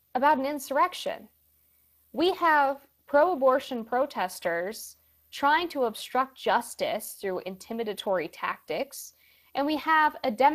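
From start to end, a switching supply whistle sits high in the spectrum, wandering between about 13.5 and 14.7 kHz at about 30 dB below the speech. Its drifting pitch sets it apart from a fixed tone. Throughout, the Speex codec leaves the speech plainly hoarse and noisy, with grainy, buzzy excitation rather than transform-codec swirl. The sound points to a mid-rate setting near 22 kbps, and nothing is present above 15.3 kHz.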